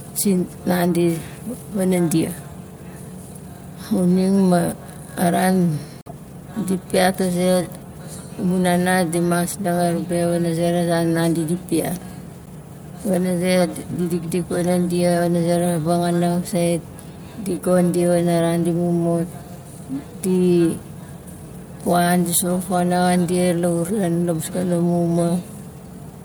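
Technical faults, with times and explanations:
6.01 to 6.11 s, corrupt frame decoded: a brief burst of wrong-sounding noise laid over the speech for about 100 ms. Damaged bits in a few consecutive compressed frames were decoded anyway, so misread gains and codes sent energy to the wrong frequencies. The result is a chirpy, noisy blip peaking around about -25 dBFS, lasting as long as the bad frames.
12.43 to 12.48 s, corrupt frame decoded: a shorter blip of about 50 ms, consistent with a couple of damaged frames, with the same misplaced-energy squeak at a similar level.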